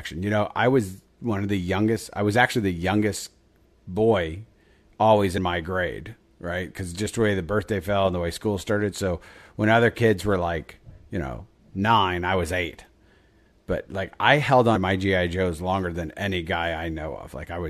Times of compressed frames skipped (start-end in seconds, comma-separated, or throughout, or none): 5.37, 14.75-14.77